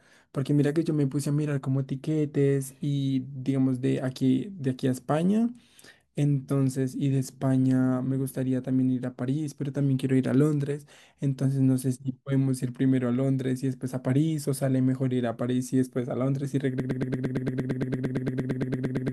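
From 16.80 s to the end, a broken-record loop takes over: the player or stream has likely stalled and kept resending the last fragment it still held in memory. A 114 ms slice of speech repeats exactly, back to back, about 20 times, producing a rapid mechanical stutter with a steady rhythm of roughly nine repeats per second. Whatever speech should have followed in those final seconds never arrives, and the clip ends mid-loop.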